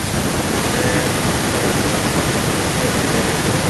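From 0.52 s to the end of the speech clip there is an echo leak: a second copy of the speech trails the original by about 0.93 s, only a little quieter than the direct sound. The likely cause is a far end on loudspeaker whose echo canceller let its microphone pickup slip through and return. On a spectrogram, each harmonic pattern reappears shifted right by that delay. On the waveform, envelopes double and fill the pauses.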